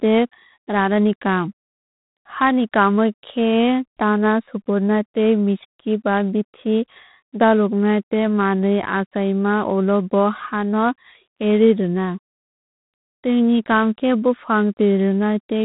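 A harsh, rasping hiss rides on the speech for the whole clip, swelling and fading with the speech level, and nothing above about 3.9 kHz survives. This is G.726 ADPCM coding, where coarse difference-from-prediction bits add noise, which fits 24 kbit/s.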